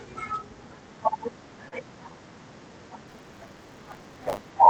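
At 1.68 to 1.73 s, a short stall from a late packet holds the speech for about 36 ms. The delayed packet resumes where it left off, so nothing is skipped, unlike a dropout. From 3.07 to 4.5 s, buffer tearing adds a steady 100 Hz robotic rattle. Around a tenth of each buffer replays audio from roughly 30 ms earlier, and the rattle follows the signal rather than sitting underneath it like hum. Throughout, the call path's 8 kHz bandwidth dulls the top end.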